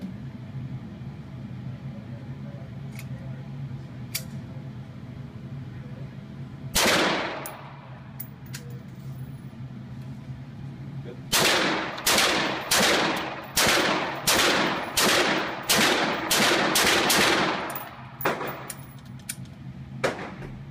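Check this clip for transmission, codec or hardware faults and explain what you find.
No transmission, codec or hardware faults turn up anywhere in this clip.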